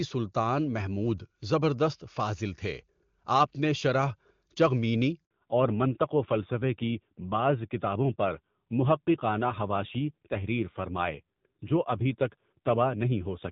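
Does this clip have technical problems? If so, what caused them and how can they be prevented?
Yes. A handover gap runs from 5.25 to 5.31 s: while the call switched networks, no speech frames arrived for about 60 ms, so the sound dies away quickly and leaves a short hole. On a waveform this shows as a sudden flat line about 60 ms wide; on a spectrogram, a thin vertical blank stripe across all frequencies. Prevention: use networks and handsets that support seamless handover with jitter-buffer concealment, so missing frames are bridged rather than dropped.

A fallback to narrowband follows from 5.31 s to the end. Before it, the clear HD Voice sound fits AMR-WB at its highest rate, 23.85 kbit/s. After it, nothing remains above 4 kHz, and the speech turns duller and rougher, which points to narrowband AMR at around 7.4 kbit/s. On a spectrogram, energy above 4 kHz stops abruptly at 5.31 s, leaving an empty band for the rest of the clip, while the waveform shows little change. 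Prevention: keep both ends and the new network on HD Voice-capable links so the codec is renegotiated to wideband after handover.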